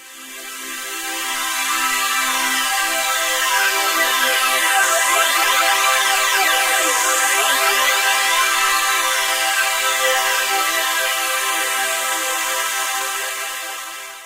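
It's a recording of everyday sounds with two timing faults. At about 4.83 s there's a skip ahead: roughly 0.7 s of audio just vanishes, and the sound on either side is butted straight together with no gap or fill, so it feels like a jump cut. That fits a stretch being dropped, either lost in transit or thrown out when the jitter buffer overflowed while later audio was already queued. Then from 12.36 s to 14.22 s you get a jitter buffer speed-up. Playback runs about 6% fast at the same pitch, because the receiver keeps snipping out tiny pitch-period-sized slivers, about a tenth of a second in total, to drain a buffer that had filled past its target. It comes across as a slightly hurried stretch right at the end of the clip rather than as a shift in pitch.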